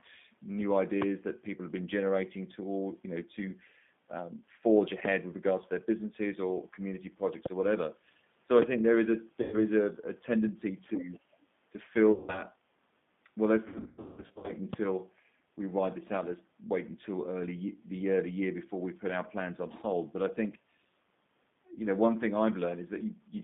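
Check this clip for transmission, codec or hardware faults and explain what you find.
The clip is speech carried over a G.729 line. It has four separate loud pops, three stretches of packet loss concealed by the codec, and one brief leak of the far side's voice.

G.729 codec damage runs through the whole clip and is plainly audible. The codec works at 8 kbit/s. It rebuilds each stretch of speech from a vocal tract filter, a pitch predictor and a few pulses, rather than sending the waveform itself. The line passes only about 150 Hz to 3.6 kHz. The voice sounds narrow, slightly rough and synthetic.

Loud pops hit at 5.05 to 5.07 s, 7.46 to 7.48 s, 8.62 to 8.64 s and 14.73 to 14.75 s. Each is a single sharp click of about 22 ms. The first peaks about 20 dB above the speech and the other three about 25 dB above it. The speech carries on underneath each one. A sudden voltage step, likely from a switch, static or a driver glitch, would explain them.

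VoIP packet loss concealed by the speech codec first appears at 9.42 to 9.56 s, where 100 ms of audio is missing. It appears again at 12.12 to 12.43 s, with 160 ms missing. The decoder fills each gap by repeating its last pitch and filter at falling gain. The speech smears into a buzzy, fading tone, and it stays weak for a moment after the packets return. The gap sizes fit 20 ms packets.

The worst loss runs from 13.68 to 14.54 s. About 580 ms goes missing in scattered gaps over roughly 800 ms. The longest single gap is 180 ms. The result is a stretch of repeated buzzy fades and broken speech. The voice stays weak after each gap, because each rebuilt frame starts from the damaged one before it.

The other side's voice leaking through can be heard from 10.88 to 11.19 s. It is a second voice at about 30 dB below the main speech. It most likely comes from the talker's loudspeaker reaching the microphone. 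The echo canceller failed to remove it completely, so a faint remnant slips through.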